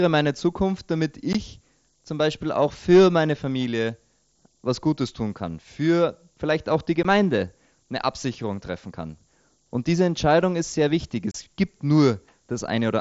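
Speech, carried over what sounds like an mSBC Bluetooth headset link, with speech band limited to 8 kHz. A steady hiss runs through the whole clip. It is low bit depth with noise shaping. The sound fits a signal reduced to about 9 bits. The rounding error has been pushed upward in frequency, so the hiss climbs toward the top of the band. It sits around 30 dB below the speech. Unconcealed Bluetooth headset packet loss cuts three holes. Nothing fills them, so each gap is a hole with abrupt edges. The first is at 1.33 s and lasts 15 ms. The second, also 15 ms, comes at 7.03 s, right after "für vielleicht auch die". The third runs from 11.31 to 11.35 s, after "ist sehr wichtig". It is 30 ms long. The short gaps fit two lost frames each. The long one fits four.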